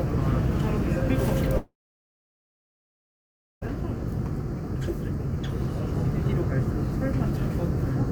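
An everyday-sound recording with a long network dropout from 1.57 to 3.64 s: the last sound smears into a fading buzz, then about 1.9 s of silence, likely lost packets, unlike a brief glitch.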